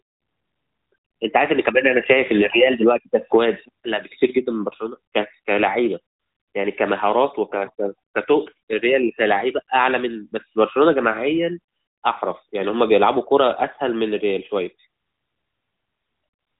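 Nothing in this speech recording stood out as a fault on listening.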